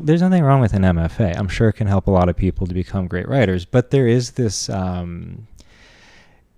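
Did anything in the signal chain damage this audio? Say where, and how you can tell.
No, nothing along the signal chain has left an audible mark on this speech recording; the signal holds steady at every stage it has passed through.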